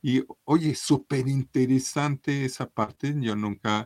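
Lost packets rebuilt from error correction at 0.87–1.01 s: the following packets carried low-bitrate copies of about 80 ms of speech, which the decoder played, so there is no gap, but the passage turns rougher and noisier. The same roughness returns at 2.87–2.93 s for about 40 ms.

Short concealed packet loss at 2.83–2.89 s and 2.95–2.99 s: about 40 ms and then 20 ms arrived too late, and the decoder extended the preceding sound to fill the holes, giving brief smears or wobbles around the rebuilt stretch.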